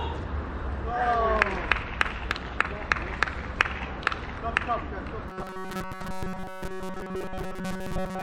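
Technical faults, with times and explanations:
5.28 to 8.23 s, robotic sound from repeated short buffers: a rigid metallic buzz at 188 Hz, loosely tracking the original. Fresh audio likely arrived too seldom, so a slice of about 5 ms was replayed through most of this stretch, skipping real audio.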